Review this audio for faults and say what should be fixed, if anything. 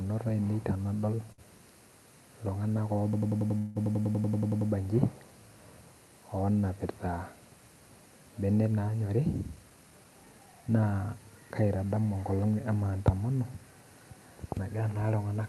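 At 1.32 to 1.41 s there's a short stall from a late packet. A packet showed up late, the jitter buffer ran dry, and the receiver stretched the last sound for about 58 ms before picking up where it left off. Nothing is lost, but that bit drags. A slightly deeper jitter buffer target would ride this out.

From 3.13 to 4.71 s you get a system hang loop. The machine froze while the audio hardware kept cycling its ring buffer, so one piece of about 93 ms repeats 15 times at roughly 10.8 Hz. That's a machine-gun stutter, which fits a 4096-sample buffer. Keep the audio thread at real-time priority and make sure the driver outputs silence rather than stale data when it's starved.

Inside that same stretch, at 3.58 to 3.78 s, there's a call audio freeze. The last sound carries on as a fading buzz or hiss for about 171 ms with no drop to silence, and then the audio resumes from where it stopped. 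The likely cause is packets held up in transit, which emptied the jitter buffer. Better network QoS or an adaptive buffer with more headroom would help.

At 9.21 to 10.69 s there's a jitter buffer speed-up. The buffer had built up too much audio, so the receiver cut out short pitch-period chunks, around 150 ms in total. The audio plays at about 111% speed with unchanged pitch and sounds hurried. Letting the buffer shrink more gradually would spread those cuts out.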